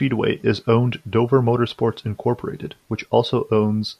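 Twice in this speech clip, the stream likely lost a tiny run of samples, a fraction of a millisecond each time, so the waveform leaps straight from one value to a later one. These dropped samples are far too brief to take out any sound. Instead, each break is heard as a single sharp click, at 0.58 s and again at 1.70 s, with a thin vertical line across the spectrum at each point.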